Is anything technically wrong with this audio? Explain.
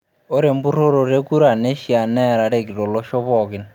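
No, nothing technically wrong can be heard here.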